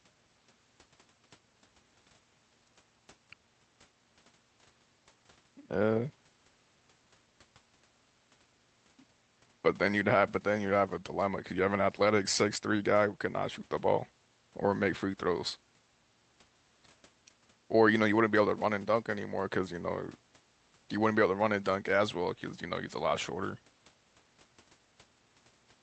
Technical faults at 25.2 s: none

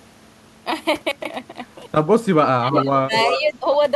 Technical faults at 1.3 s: chunks out of order

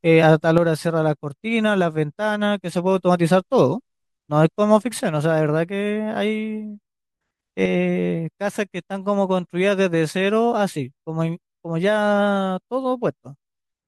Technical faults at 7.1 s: one channel drops out

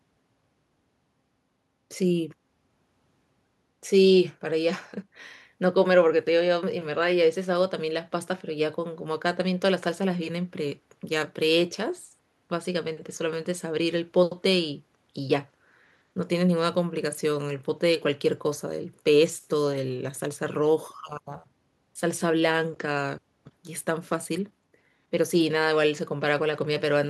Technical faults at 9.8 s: none

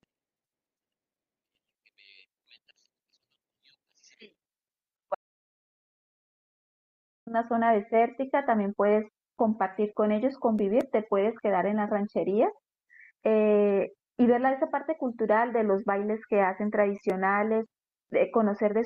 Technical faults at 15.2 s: none

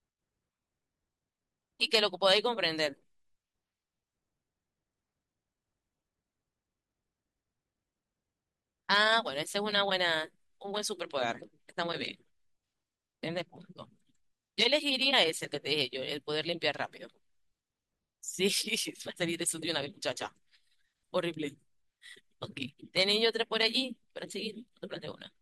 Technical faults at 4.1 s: none

